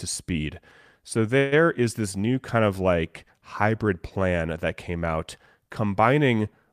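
At 1.37 to 1.54 s, just before "is this new kind", a call audio freeze stretches the last speech sound into a fading buzz or hiss for about 145 ms. This is likely the jitter buffer running empty. Speech resumes intact but late, appearing as smeared, steady spectrogram bands and a decaying waveform.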